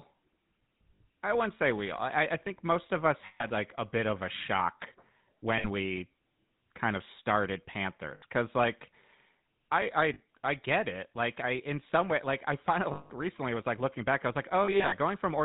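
The whole clip runs through the GSM full-rate codec at 13 kbps. Nothing above 4 kHz survives. The coarse pulse excitation gives the voice a plainly audible buzzy, gravelly roughness.

Lost GSM frames occur at 0.96, 3.26, 5.58, 8.14, 10.14, 12.92 and 14.64 s, lasting 40 to 180 ms. The decoder repeats the last good frame, so each loss rings metallically. The 8.14 s loss falls between "kind of started" and "because like". At 14.64 s, short losses scatter across about 0.3 s.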